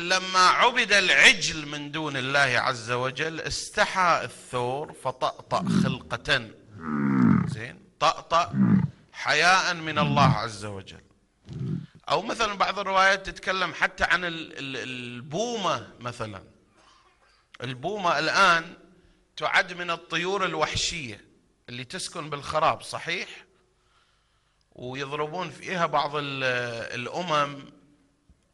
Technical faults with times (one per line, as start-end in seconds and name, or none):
none